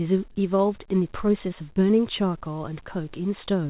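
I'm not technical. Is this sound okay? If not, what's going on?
No. At about 1.73 to 1.79 s, a few hundredths of a second of the call arrived too late, a short concealed packet loss. The receiver papered over the gap by stretching the preceding sound, so you hear a brief smear or wobble in the speech there.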